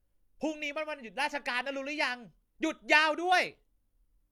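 Throughout the speech the sound carries the coarse, smeared texture of heavy compression despite being a high-bitrate MP3, a sign of low-bitrate audio saved at a high bitrate, likely from an HE-AAC source around 48 kbit/s re-encoded at 320 kbit/s, which cannot restore the discarded detail.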